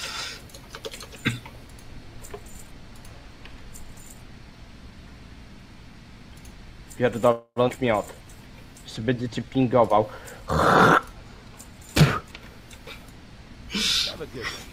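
Three network faults cluster in the middle of the audio. From 7.31 to 7.59 s there is a call audio freeze: the last sound is stretched into a fading buzz or hiss for about 249 ms, ending in 50 ms of silence, then resumes exactly where it stopped. Nothing is lost, which is the sign of packets likely held up while the jitter buffer ran dry. Right after, at 7.68 to 7.72 s, a skip ahead has the opposite signature: no pause, just a near-seamless 7 ms join across a jump, with roughly 150 ms of material gone. From 8.15 to 9.51 s, a jitter buffer slow-down plays the audio at 89% speed, adding 157 ms by repeating single pitch periods or bits of pauses. Sounds are drawn out but the pitch stays the same, unlike a tape-style slowdown, and there is no gap as in the freeze.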